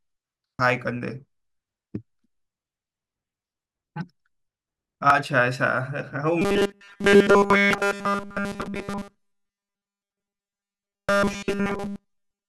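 A brief glitch cuts into the speech at 0.59 s and again at 5.10 s, each only a few milliseconds long. These are damaged data in a compressed stream: bytes in the encoded file were lost or corrupted, so the decoder misread those frames, lost sync and skipped ahead to the next valid frame header. The same blip returns at 7.73 s and 11.09 s.

From 6.42 s to the end, the speech turns into a rigid, metallic buzz pitched at 200 Hz that only loosely traces the words, with essentially all of that stretch affected. This is robotic sound from repeated short buffers. The likely cause is audio arriving too rarely, so playback keeps looping the most recent slice while the real audio is dropped. A 200 Hz buzz points to a repeated slice of about 5 ms, and the loop rate imposes that fixed buzz.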